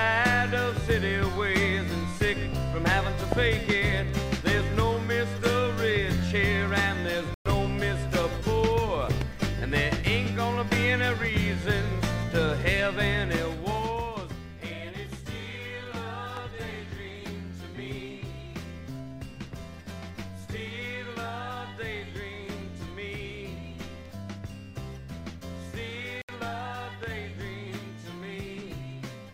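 At 3.32 s a loud pop lands on top of the sound, a single sharp pulse about 20 dB above it, lasting about 22 ms while the audio continues underneath. It is likely a voltage step, from a plug, switch, static discharge or driver glitch, passing through the downstream circuitry. At 7.34 s a Bluetooth stall cuts the audio to silence for 114 ms before it resumes around 7.48 s, likely because interference delayed packets until the headphone buffer ran empty. Further loud pops of the same single-pulse kind follow at 9.21 s, about 10 dB above the sound, and at 16.37 s, about 15 dB above it. A second Bluetooth stall at 26.22 s drops the audio out for 70 ms before playback picks up again. A final loud pop at 27.03 s peaks about 20 dB above the sound.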